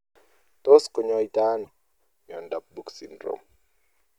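At 1.61 s the speech is broken by damaged data in a compressed stream, lasting to about 1.69 s. For roughly 80 ms the decoder is fed corrupted bytes where valid frames should be. It misreads or discards them, loses frame sync, and has to hunt for the next clean header before normal decoding resumes. The result is a brief chirp, squawk, click or short hole in the speech.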